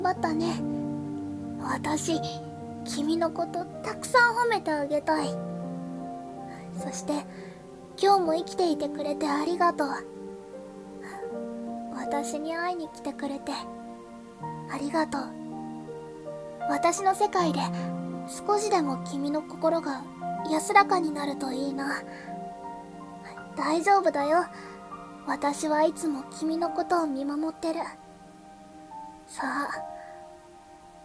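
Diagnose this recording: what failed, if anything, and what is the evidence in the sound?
Nothing failed; no fault is audible anywhere.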